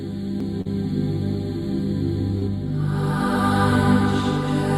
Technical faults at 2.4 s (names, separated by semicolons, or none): short concealed packet loss